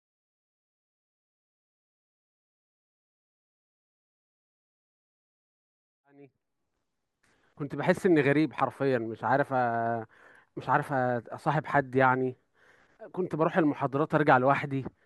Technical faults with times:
none

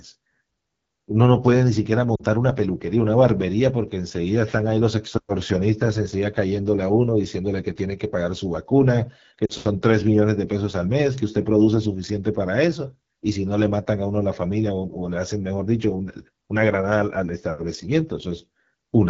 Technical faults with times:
0.00-19.09 AMR wideband (HD Voice) codec
2.16-2.24 lost AMR speech frames
9.46-9.54 lost AMR speech frames

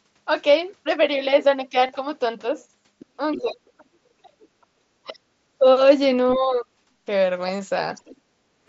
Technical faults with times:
1.86-1.89 concealed Bluetooth headset packet loss
2.99-3.06 other side's voice leaking through
3.33-3.41 other side's voice leaking through
3.40-5.33 speech suppressed in double talk
5.07-5.14 other side's voice leaking through
6.35-6.68 speech suppressed in double talk
7.56-7.59 concealed Bluetooth headset packet loss
7.95-8.17 other side's voice leaking through
8.42-8.61 background gated by the echo canceller

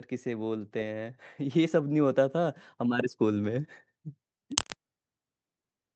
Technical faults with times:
0.23-3.77 automatic gain rising

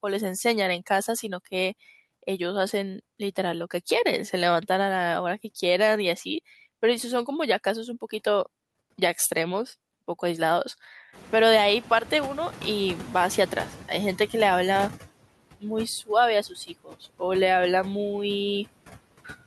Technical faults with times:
0.00-19.46 noise suppressor artifacts
11.12-13.86 noise suppressor catching up
16.49-17.21 speech cut by the noise suppressor

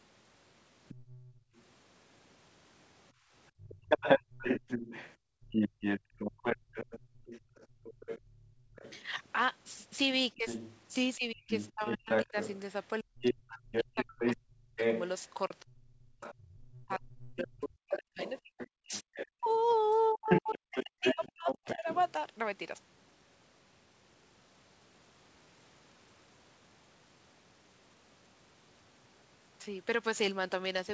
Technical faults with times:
0.88-1.62 other side's voice leaking through
1.32-1.55 background gated by the echo canceller
3.13-3.89 background gated by the echo canceller
3.61-9.02 other side's voice leaking through
5.17-8.76 background gated by the echo canceller
10.33-21.86 speech suppressed in double talk
10.46-22.12 other side's voice leaking through
19.72 bit errors on an ADPCM link

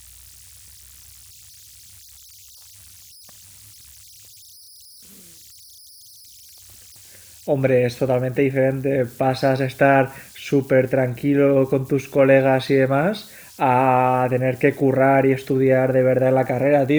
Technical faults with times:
0.00-16.99 converter idle tones

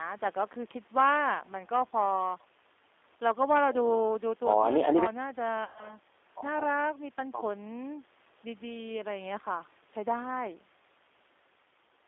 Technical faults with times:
0.00-12.07 G.729 codec
5.64-5.96 VoIP packet loss concealed by the speech codec

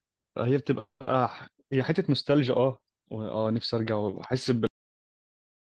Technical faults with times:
0.79-1.02 call audio freeze
4.67-5.79 cut-off end

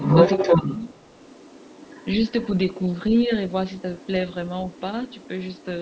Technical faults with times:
0.00-2.48 other side's voice leaking through
3.25-3.31 speech suppressed in double talk
3.74-4.08 other side's voice leaking through
4.70-5.65 other side's voice leaking through

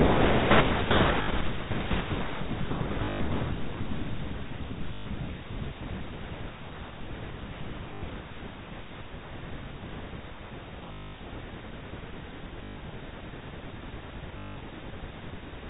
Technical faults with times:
1.22-1.28 packet loss with last packet repeated
3.04-3.20 packet loss with last packet repeated
4.94-5.06 packet loss with last packet repeated
7.94-8.02 packet loss with last packet repeated
10.92-11.14 packet loss with last packet repeated
12.64-12.76 packet loss with last packet repeated
14.38-14.56 packet loss with last packet repeated

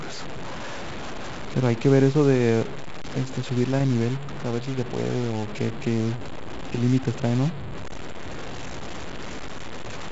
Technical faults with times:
0.00-10.12 low bit depth without dither

